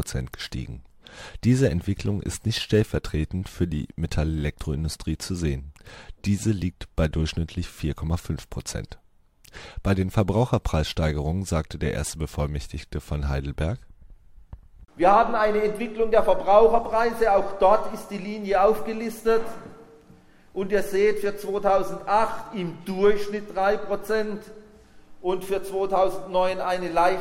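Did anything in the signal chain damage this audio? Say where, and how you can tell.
No signal-chain damage audible.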